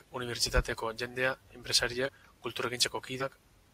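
Compressed frames skipped at 2.05 to 2.09 s: the speech jumps ahead by roughly 150 ms, which points to about three lost frames of roughly 43 ms each. The decoder skipped them.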